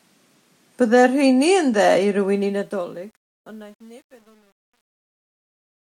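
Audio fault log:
2.34–5.86 s, truncation distortion on a fade: As the speech fades out from around 2.3 seconds to the end, the fade is quantised coarsely with no dither, which points to a gain stage keeping about 9 bits. As the level falls toward the smallest step, the waveform collapses into a few square steps. From 3.13 s to 5.86 s the tail turns gritty instead of thinning away cleanly.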